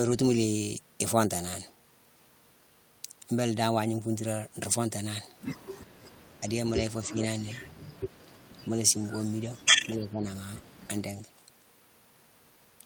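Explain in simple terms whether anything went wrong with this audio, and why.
The speech briefly drops in level at 6.4, 7.04, 7.41, 9.42 and 9.85 seconds, each time for under half a second. This is speech suppressed in double talk, likely an echo canceller turning this side down while the other side spoke. Unlike a network dropout, the speech dips rather than vanishing outright.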